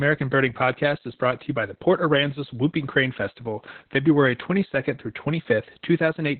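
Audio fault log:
throughout, Opus voice compression: the speech is cut off above about 4.3 kHz, muffled, hoarse and a bit robotic, which fits narrowband SILK coding at around 8 kbps.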